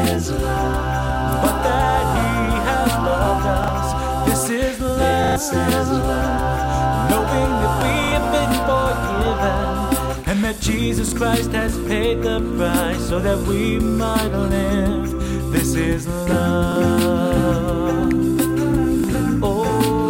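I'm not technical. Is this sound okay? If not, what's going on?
No. Sharp snaps at 1.32, 7.81 and 18.11 seconds are an electrical switching spike, likely from a nearby switch, motor or static discharge.

Short stutters at 3.64, 5.24 to 5.36, 8.04 to 8.12, 11.08, 16.72 and 19.0 seconds are a repeated buffer. Audio arrived late, so a 40 ms piece replayed and the real sound there was lost.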